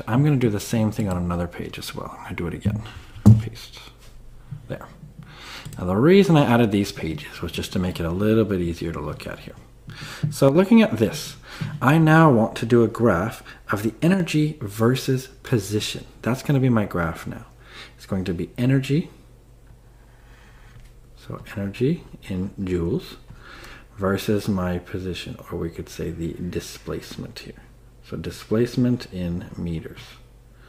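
Brief dips of about 6 dB at 10.49–10.55 s and 14.14–14.20 s, likely one channel dropping out, halving the mono sum.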